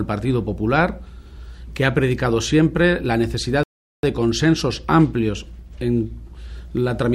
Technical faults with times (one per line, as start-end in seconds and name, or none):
3.63-4.03 rebuffering stall